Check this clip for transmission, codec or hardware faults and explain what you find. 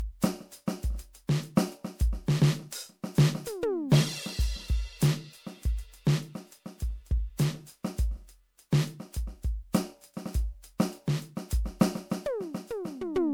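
The music has one codec fault. Generation loss, throughout: the swirly, hollow sound with smeared attacks likely comes from about seven MP3 re-encodes near 128 kbit/s, each pass stacking fresh quantisation noise and spectral holes.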